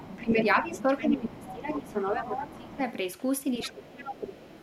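From 0.0 to 0.25 s a second voice sits faintly under the speech, about 20 dB down: the other side's voice leaking through, likely residual loudspeaker echo the canceller missed. From 0.2 to 2.8 s the speech is suppressed in double talk, dipping by up to about 15 dB across roughly two seconds, likely because the canceller attenuated everything while both sides spoke. Stronger leakage, only about 10 dB below the speech, runs from 0.67 to 2.77 s. From 3.6 s to the end the far voice returns about 15 dB down, and between 3.71 and 4.49 s the speech drops again by up to about 20 dB.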